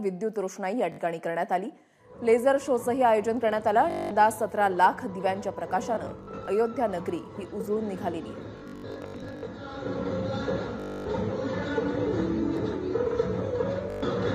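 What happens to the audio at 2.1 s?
Nothing goes wrong at 2.1 s; the audio plays through that moment intact, with no dropout, click or distortion.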